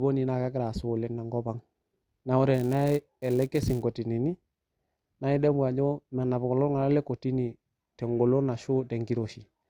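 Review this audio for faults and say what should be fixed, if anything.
Filter restarted on every block, 2.54 to 3.83 s: state resets each block, so a start transient repeats as a 188 Hz buzz tracking the speech level.

To prevent it, keep the filter's state from the end of one block to the start of the next.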